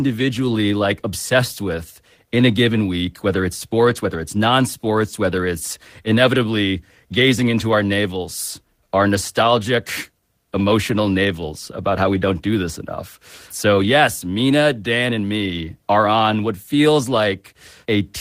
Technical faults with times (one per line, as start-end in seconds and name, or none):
none